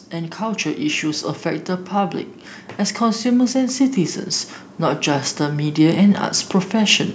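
Automatic gain rising begins at 4.8 s and continues to 7.09 s, near the end of the clip. The gain control judged the incoming level too low and pushed its gain up slowly, by about 4 dB across roughly 2.3 seconds. Because the boost applies to the whole signal, the voice and the background noise swell together, so the room tone creeps forward along with the speaker rather than the speech alone getting louder.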